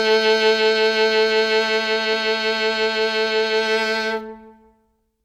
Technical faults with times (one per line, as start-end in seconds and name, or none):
none